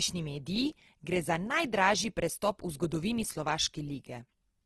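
Opus compression runs through the whole speech, plainly audible. Nothing sounds above 12.2 kHz. Bit-starved bands get filled with folded or noisy content, so tones turn rough and grainy. This likely comes from Opus music mode at a rate fitting about 16 kbps.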